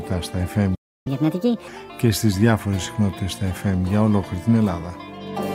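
At 0.75 s the player most likely ran short of data or had its output thread held up, so nothing reached the output until it recovered. This is a playback stall: the sound stops abruptly in mid-flow and a gap of silence lasting roughly 0.31 s follows, ending at 1.07 s. The break is long enough to hear as a clear dropout rather than a click or brief glitch.

From 1.07 s to 1.68 s the player then works through the backlog it built up during the gap by resampling it faster, a catch-up at higher speed. The audio runs at 1.5 times normal speed, and because resampling ties pitch to speed, everything sounds raised by around seven semitones, noticeably quick and chipmunk-like. At 1.68 s the rate drops back and speed and pitch return to normal.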